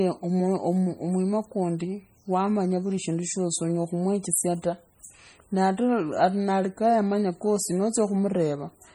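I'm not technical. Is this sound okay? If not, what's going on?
No. The speech sounds watery and swirly the whole way through, with chirpy s sounds. That is heavy MP3 compression, likely from squeezing the file too small.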